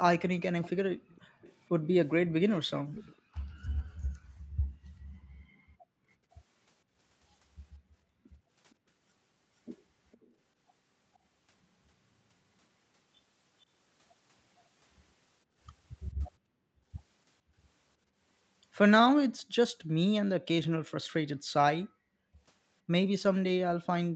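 Right from 0.63 s to 3.43 s there's a faint second copy of the speech trailing the original by about 457 ms, sitting roughly 20 dB down. That's an echo leak: the far end is on a loudspeaker, and its echo canceller most likely let some of what its mic picked up slip back to us. Overlapping that, from 0.94 s to 1.4 s, the room sound ducks for about a third of a second. That's background gated by the echo canceller, which clamped the mic down by about 40 dB while the speaker was playing. The same gating returns from 3.16 s to 6.3 s, this time in pieces adding up to around a second of missing room tone. It hits again briefly at 8.18 to 8.33 s. Then the echo leak comes back from 8.71 s to 10.32 s, at the same 457 ms lag but much quieter, around 35 dB under the speech. A last tiny scrap of it shows up at 13.61 to 13.65 s, barely there. The gating then takes out about a second of background in stretches between 15.45 s and 18.17 s, and roughly 0.7 s more between 21.1 s and 22.4 s. 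Each time, the room tone snaps back once the canceller releases.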